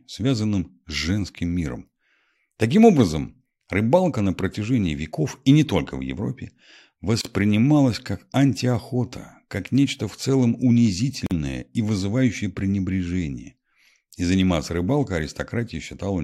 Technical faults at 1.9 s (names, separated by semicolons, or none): none